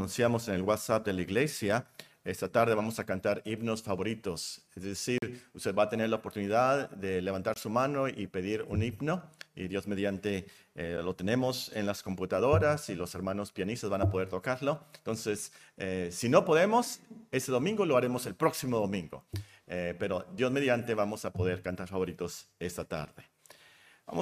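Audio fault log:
5.18–5.22 s, 7.54–7.56 s and 10.97 s: Bluetooth stall. The sound cuts to clean silence for 41 ms, 21 ms and 7 ms, then carries on, likely because interference delayed packets and the headphones' buffer ran empty. Unlike a click or crackle, each gap is a true hole in the sound.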